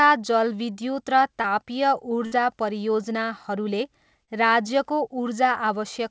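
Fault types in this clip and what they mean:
Short concealed packet loss: A sliver of the call arrived too late to be decoded, so the receiver papered over it by carrying the last sound forward and then easing back into the real audio. The first one, right after "जलविद्युत र" at about 1.42 s, is only around 20 ms and comes across as a quick smear. The second, near 4.24 s, runs about 40 ms, long enough to hear as a brief wobble in the speech.
Burst of packet loss: Here a run of audio, about 60 ms, went missing in one go, starting at about 2.26 s. The receiver stretched the previous sound across the gap while fading it down, so you get a short held tail instead of real speech. When the audio comes back around 2.34 s it picks up further along, and whatever sat in that hole is simply gone. It's duller than usual because nothing reaches above 8 kHz, which points to a wideband call codec such as G.722.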